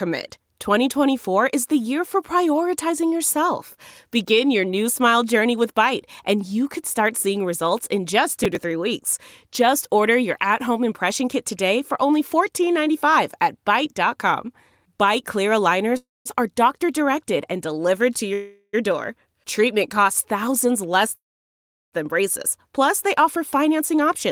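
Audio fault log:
8.33–8.62 s, processor overload crackle: Right after "start seeing results in" there's a short patch of gritty crackle lasting about 0.3 s. The machine couldn't finish its tiny audio buffers on time, and around ten deadlines were missed back to back, which fits buffers of a few milliseconds each. Each miss was skipped outright, so the sound is chopped by a string of hard-edged micro-gaps. That's what gives it the tearing texture, and it clears once the load eases.
15.97–21.94 s, call audio freeze: There are three stalls where the sound hangs, buzzes briefly, then drops out before picking up exactly where it left off. At 15.97 s it lasts 0.29 s, about 0.2 s of it silent. After "directed and delivered to" at 18.33 s it lasts 0.4 s, with only a 20 ms silence. After "costs thousands less" at 21.15 s it lasts 0.77 s, about 0.72 s of it dead quiet. Nothing is lost, only delayed, which points to packets likely held up in transit and an emptied jitter buffer.
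23.22–24.09 s, jitter buffer speed-up: Near the end the sound runs about 4% fast but keeps its pitch, so it comes across as slightly rushed rather than chipmunky. The receiver had built up more buffered audio than it wanted, probably from the backlog after those freezes. It trimmed the excess by snipping out pitch-period-sized slivers, around 40 ms in total over this stretch.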